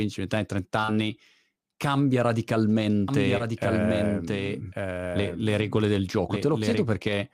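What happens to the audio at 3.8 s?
At 3.8 s the signal is most likely being captured twice, with a second, slower path feeding the same speech back into the mix about a second late. This is a doubled audio track, running from 3.08 s to 6.85 s. The late copy is full-band, roughly 5 dB quieter than the original, and dry, with no decay or room colour. It starts and stops abruptly, so the speech overlaps a delayed replica of itself.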